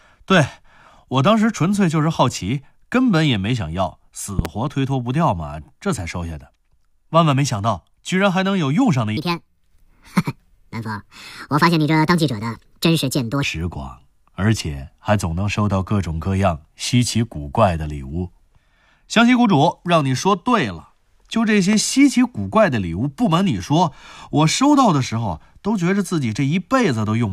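At 4.39 s there's a loud pop, actually a quick double, lasting until about 4.48 s and peaking roughly 15 dB above the speech, which carries on underneath. It's likely a voltage spike from a plug, switch or static discharge that the downstream circuitry turned into a sharp thump.

From 9.17 s to 13.44 s there's a section at the wrong speed. It runs 1.5 times too fast, so the speech sounds rushed and pitched up by roughly seven semitones, giving it that chipmunk edge. It snaps back to normal at the far end. That's likely from the passage being played against the wrong clock somewhere in editing or playback, which shifts speed and pitch together.

There's one more loud pop from 21.73 s to 21.76 s. This one is a single hit, about 10 dB over the speech, so it's noticeably softer than the earlier pair but still a clear, sharp click on top of the speech. It's likely another brief electrical transient, such as a switch or static, getting into the signal path.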